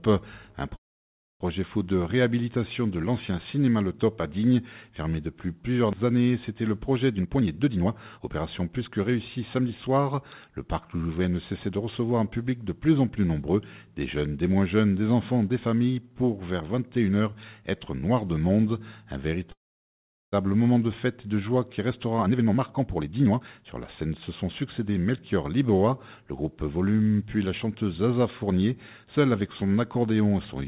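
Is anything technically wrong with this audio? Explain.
Yes, there are two kinds of fault, each happening twice, carried over a call path whose band stops at 4 kHz, which fits G.711 mu-law at 64 kbps.

Call audio freeze, from 0.76 to 1.42 s and from 19.52 to 20.34 s: packets were likely held up and the jitter buffer ran dry. A brief fading tail gives way to silence for about 0.62 s and then 0.77 s. The audio resumes exactly where it halted, so this is an inserted gap rather than a dropout that loses material.

Jitter buffer speed-up, from 7.16 to 9.89 s and from 21.9 to 25.45 s: the receiver trimmed tiny pitch-period slices repeatedly to shed excess buffered delay, roughly 0.7 s each time. The audio runs at 123% speed and sounds hurried, but the pitch stays unchanged, unlike a resampling speed error.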